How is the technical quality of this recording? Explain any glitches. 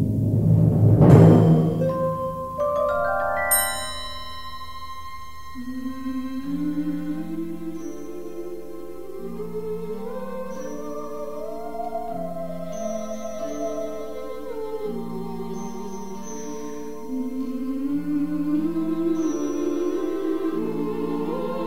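There is one glitch. At 2.95 s a DC step shifts the waveform's zero line by about -34 dBFS and holds to the end, producing a single low thump while the sound continues unchanged, unlike a dropout or pop.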